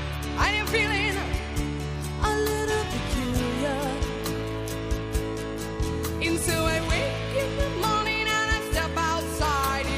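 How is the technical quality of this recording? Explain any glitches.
No glitches turn up anywhere in this recording, so there's nothing here to pick apart or explain.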